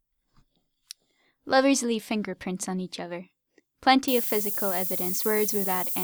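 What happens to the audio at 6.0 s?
At 6.0 s the speech is still under low bit depth with noise shaping, which runs from 4.08 s to the end. Only 5 bits remain, and the rounding error is pushed upward, giving a thin hiss nearly as loud as the speech. A spectrogram shows a bright noise floor climbing toward the top of the band.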